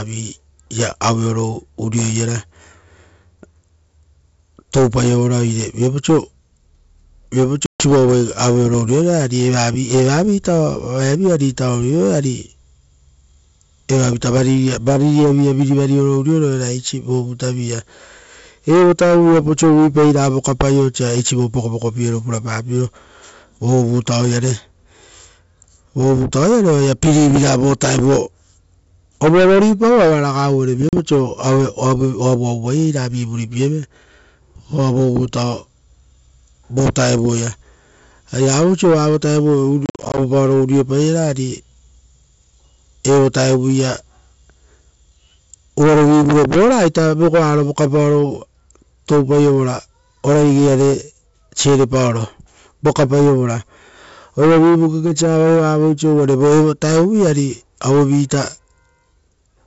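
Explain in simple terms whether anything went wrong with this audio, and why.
Packet loss on an ADPCM call cut the sound three times: a gap at 7.66 s, a short one at 30.89 s, and a broken patch from 39.86 to 40.19 s. The decoder loses its place in each hole, so the speech returns slightly distorted for a moment.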